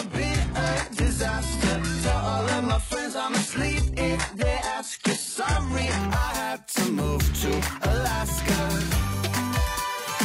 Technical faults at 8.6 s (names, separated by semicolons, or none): none